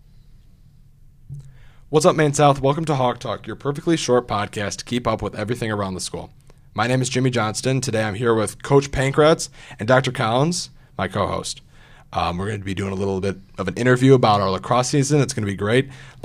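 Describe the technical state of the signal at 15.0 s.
At 15.0 s the speech signal is intact, with no audible fault at that moment.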